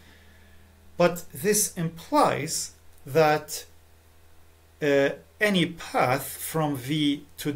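No audible faults turn up anywhere in this audio.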